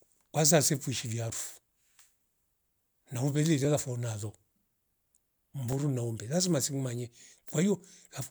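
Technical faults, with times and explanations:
1.57–7.80 s: clock drift buffer slips. A short click recurs about every 2.08 s across the speech, four in all. The likely cause is two devices clocked independently, differing by a few hundred parts per million, so the buffer between them periodically drops or repeats a few dozen samples.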